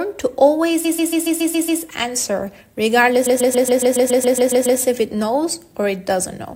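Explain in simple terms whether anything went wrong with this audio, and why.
Repeated frames: a short chunk of the compressed audio, about 139 ms long, was sent again and again, so the player replayed it, causing a stuttering loop. From 0.84 to 1.81 s it repeats 7 extra times, adding about 1 second. From 3.25 to 4.79 s it repeats 11 extra times, adding about 1.5 seconds.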